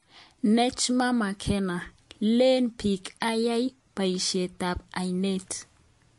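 From start to finish, the speech carries plainly audible damage that sounds like MP3 compression at a low bitrate, likely around 48 kbps. With too few bits to go round, the encoder discards the treble and drops weak frequency components, so the voice turns watery and swirly. On a spectrogram, energy stops abruptly at 11.3 kHz across the whole clip, and the region below shows patchy, flickering holes where components switch off between frames.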